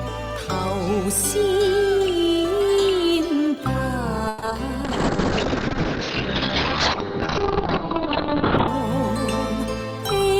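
Repeated packet loss (robotic sound) runs from 4.28 to 4.58 s. Several short holes arrive in quick succession, each filled by stretching the preceding sound, so over half the span is patched and the longest gap is 140 ms. It comes out choppy.

A call bitrate drop follows from 4.85 to 8.74 s. The encoder is starved of bits, coding coarsely and cutting the top end from 20 kHz down to 4 kHz. The audio turns muffled and rough, which fits a fall from 32 kbps to roughly 7 kbps.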